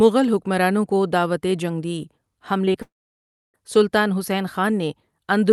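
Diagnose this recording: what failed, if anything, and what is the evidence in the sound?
Two brief smears at 2.65 s and 2.73 s, each about 20 ms long. This is short concealed packet loss on the network: the decoder stretched the preceding sound across each missing packet.

From 2.82 s to 3.56 s a fading buzz gives way to about 0.65 s of silence before "سلطان حسین". This is a long network dropout, likely lost packets, with 0.72 s of audio never played.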